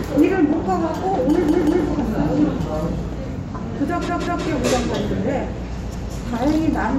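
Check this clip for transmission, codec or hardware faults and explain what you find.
Three repeated-buffer faults are present. New audio failed to reach the playback device in time, so it replayed its last block of about 186 ms, which fits an 8192-sample buffer. The same segment is heard again with a hard join each time, giving a stutter. At 1.49–1.86 s and 4.09–4.46 s the block repeats twice more; at 5.94–6.13 s it repeats once. The audio is delayed rather than lost.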